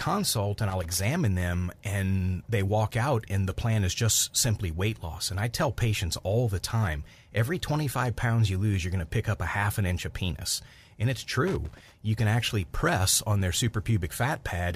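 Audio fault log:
0.70–1.00 s and 11.48–11.92 s, loose connector crackle: a worn contact makes and breaks the signal, chopping the speech into irregular crackle bursts, the first ending before "them and they walk".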